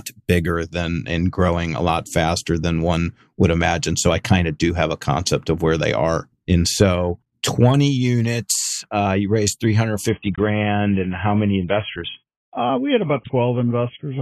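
From 10.09 s to the end, the adaptive stream switched to a lower bitrate. The speech abruptly loses everything above 3.7 kHz, with no gap.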